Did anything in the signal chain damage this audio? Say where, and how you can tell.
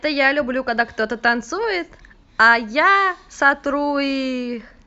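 No, nothing in the signal chain damaged this audio.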